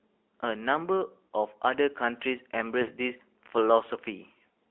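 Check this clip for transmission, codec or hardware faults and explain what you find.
Two faults are present: narrowband mobile coding across the whole speech clip, and two short dropouts from lost speech frames.

AMR narrowband mobile codec, throughout. The speech is sampled at 8 kHz and passes through a vocal-tract model fed by sparse pulse excitation, and only a telephone band of roughly 300 Hz to 3.5 kHz survives. Everything above is cut, and the low end is thinned. The damage is plainly audible: a buzzy, synthetic edge on the speech, consistent with a mid-rate mode of around 10.2 kbps.

Lost AMR speech frames, at 1.26 to 1.31 s and at 2.82 to 2.90 s. When frames arrive corrupted, the decoder fills the gap by repeating its last good pitch and spectral settings at a falling level. The first gap lasts about 40 ms, which fits two 20 ms frames, and is heard as a brief smeared dip. The second is about 60 ms, which points to three frames, and gives a longer drawn-out fade before the speech resumes slightly rough.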